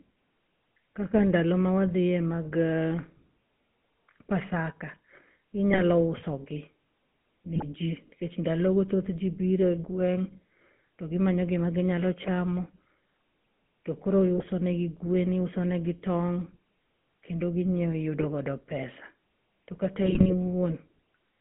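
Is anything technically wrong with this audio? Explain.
Yes, two related problems. First, the whole clip has that GSM full-rate codec sound, which fits a 13 kbps full-rate link. The codec models the vocal tract and drives it with a coarse, regularly spaced pulse excitation. Everything is confined to a line band of roughly 150 Hz to 3.4 kHz. The speech comes out buzzy and gravelly, with a plainly audible grainy roughness sitting on every syllable.

Second, there are six bursts of GSM bit errors: 5.68 to 5.80 s, 7.54 to 7.64 s, 12.24 to 12.28 s, 14.37 to 14.46 s, 18.20 to 18.25 s, and the longest, 20.02 to 20.33 s. Corrupted filter, pitch or gain values reach the decoder, which fits a bit error rate of a few percent. For those frames the spectrum warps or the level jumps, so you hear short squawks, pops and gargling breaking through the speech.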